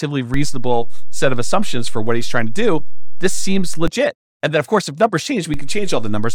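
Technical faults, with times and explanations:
0.34 to 3.88 s and 5.54 s to the end, DC step: the waveform's zero line jumps to an offset of about -10 dBFS at 0.34 s and returns at 3.88 s, then jumps again by about -13 dBFS at 5.54 s and holds to the end. Each sudden shift of the baseline is a near-instant, very low-frequency transient, heard as a low thump or click at 0.34, 3.88 and 5.54 s, while the speech carries on unchanged over the offset.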